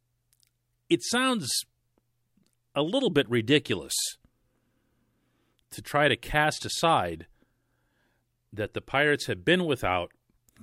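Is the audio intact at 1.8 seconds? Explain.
Yes, the speech at 1.8 seconds is intact, with no audible fault at that moment.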